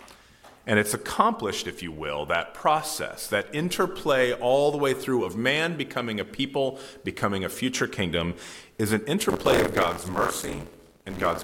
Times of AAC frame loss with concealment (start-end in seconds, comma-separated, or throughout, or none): none